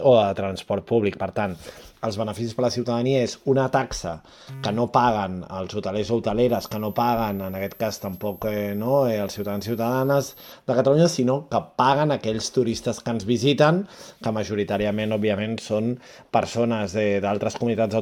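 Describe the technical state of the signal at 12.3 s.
At 12.3 s the signal is intact, with no dropout, distortion, glitch or other technical fault.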